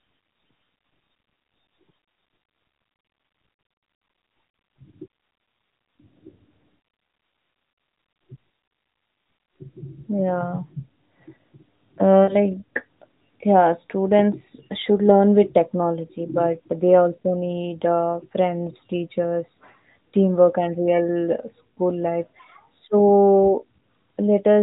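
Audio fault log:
12.25–12.36 s, lost AMR speech frames. The speech briefly smears and dips, which fits two dropped 20 ms frames. The decoder repeats its last good pitch and vocal tract settings at falling gain. Sound then resumes rough for a moment through the narrowband AMR path.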